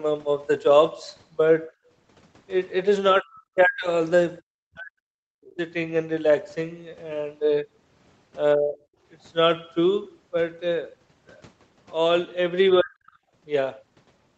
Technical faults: background gated by the echo canceller; speech suppressed in double talk; other side's voice leaking through

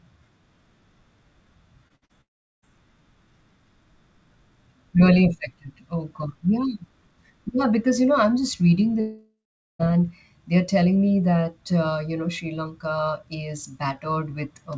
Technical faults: short concealed packet loss; burst of packet loss; long network dropout

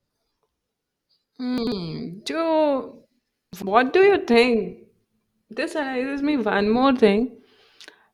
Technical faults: chunks out of order

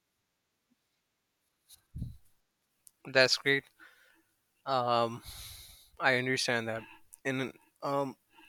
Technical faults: repeated buffer

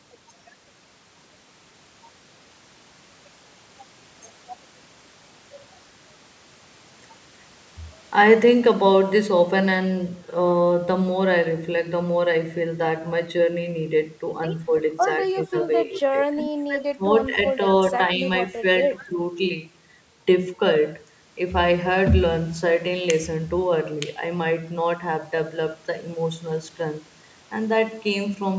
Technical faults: speech suppressed in double talk; echo leak

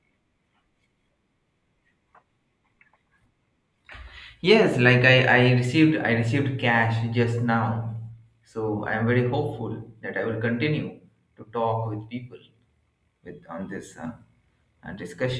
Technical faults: none

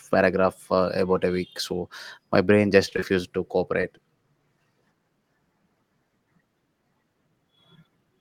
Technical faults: repeated packet loss (robotic sound); short concealed packet loss

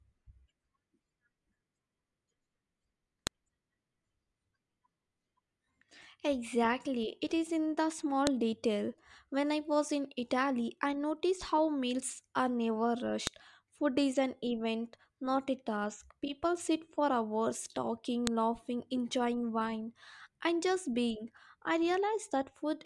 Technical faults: file header played as audio

